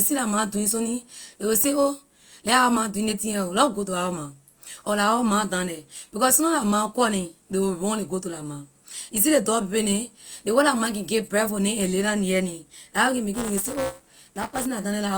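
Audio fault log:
13.34–14.66 s, buffer tearing: after "la what can", writer and hardware read pointers cross each period, splicing in about a tenth of stale audio roughly 10 ms old, giving a 200 Hz robotic buzz.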